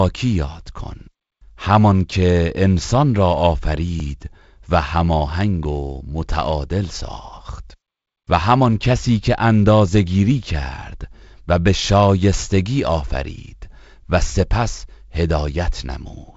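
At 4.0 s and again at 5.65 s, a dropped buffer (overrun) likely occurs: the software misses its read and a few milliseconds of speech are overwritten, so the two sides butt together. Each is heard as a slight jump in the sound.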